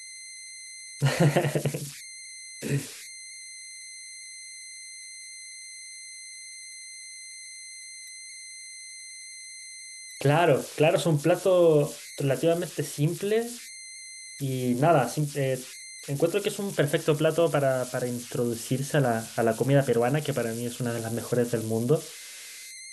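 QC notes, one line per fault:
Throughout, converter idle tones: an undithered delta-sigma converter settles into repeating bit patterns on quiet input, leaving a whistle around 2 kHz in pauses and grainy noise under soft speech, about 16 dB below the signal. The spectrogram shows a thin horizontal line.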